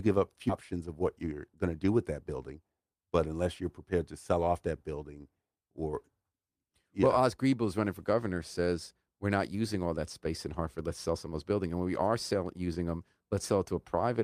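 At 0.49–0.51 s, just before "of what", a skip ahead drops roughly 0.4 s of speech, so playback jumps forward with no fill and joins both sides almost directly. From 1.24 to 1.56 s, between "of what" and "going to do with", a jitter buffer speed-up trims repeated pitch-period pieces, around 50 ms in total, so speech runs about 112% fast at unchanged pitch and sounds hurried.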